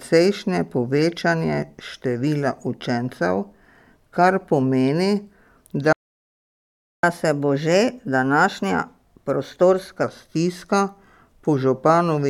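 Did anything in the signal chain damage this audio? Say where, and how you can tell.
Yes, at the playback stage. At 5.93 s the speech cuts out in mid-flow and the output stays silent for about 1.1 s, resuming at 7.03 s. A clean gap like this, with no noise or glitching, is the signature of a playback stall: the player was likely starved of data or had its audio thread blocked, so it had nothing to send to the output until it recovered.

Straight after the stall, from 7.03 to 10.03 s, the speech runs quick and sits higher in pitch, by roughly a semitone and a half, before settling back to normal. This is catch-up at higher speed. The player is resampling its backlog to play it at 1.1 times real time, recovering some of the time lost in the silence. Because it speeds up by resampling, the pitch rises along with the tempo.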